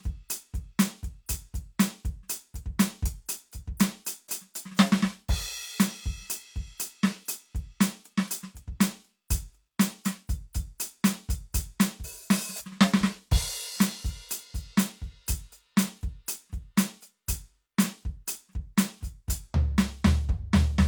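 Nothing in this music trips any alarms; there's no technical fault to point to anywhere along the way.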